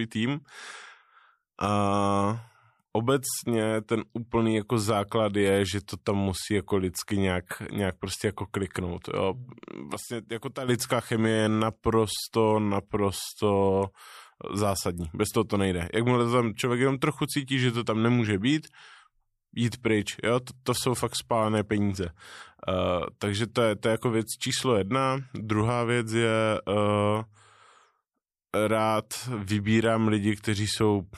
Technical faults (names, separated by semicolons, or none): sudden gain jump